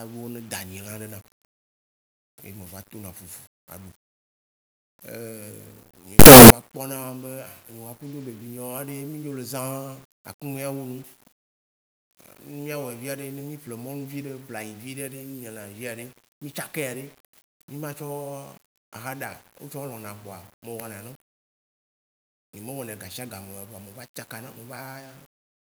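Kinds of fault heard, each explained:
Signed and unsigned mixed up: from 6.19 to 6.50 s the speech collapses into a loud, harsh roar in which the quiet moments are as loud as the rest, likely because the 8-bit samples were read with the wrong sign convention. Flipping the top bit makes each zero crossing jump across the full range. The waveform lurches between large positive and negative swings there, and the spectrogram shows a dense broadband smear reaching the top frequencies.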